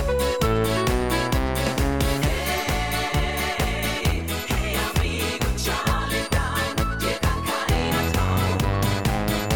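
From the very start to about 2.5 s there's timecode bleed under the audio: a thin, steady chirping warble sitting roughly 30 dB below the main sound. That's linear timecode leaking in from a neighbouring track or cable. The code's square wave flips between two pitches near 1 kHz and 2 kHz, and the rhythm of the chirp points to 23.976 fps code. After 2.5 s the warble is gone.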